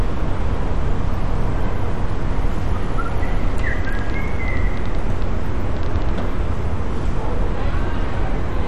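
Throughout, the encoding has too few bits to cover every band, likely from MP2 compression at a low rate, which fits roughly 56 kbps. Upper sub-bands are dropped, leaving nothing above 14.4 kHz, and the remaining bands are coarsely quantised, so the sound is dull with a heavy gurgling, granular texture.

From 3.85 s to 6.10 s, something injects repeated pulses into the signal, likely interference or a faulty connection, producing a train of clicks. Around twenty similar clicks arrive at an uneven pace, about 7.6 per second, and they peak roughly as loud as the sound itself.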